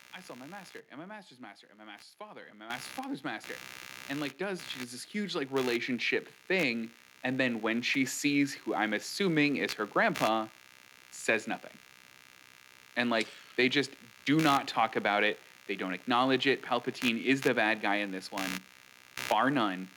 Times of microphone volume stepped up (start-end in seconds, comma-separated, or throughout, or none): 2.70, 4.80